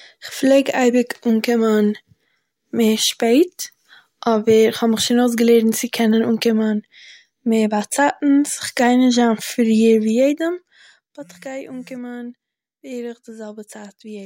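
A speech clip in which a gain reduction of about 15 dB, from 10.05 to 11.19 s, is applied in coarse unsmoothed steps, around forty a second, causing zipper noise: each jump clicks, so a fast ticking rides the speech while it drops, just before "באט איך גיי אנקומען".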